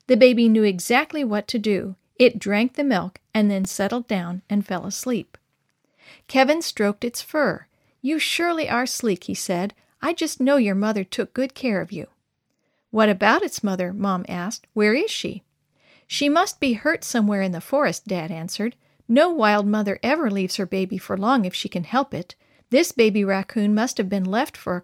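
From 3.65 to 3.81 s, after "the milk and then", processor overload crackle: several roughly 3 ms buffers missed in a row leave silent gaps, giving gritty tearing rather than one clean dropout.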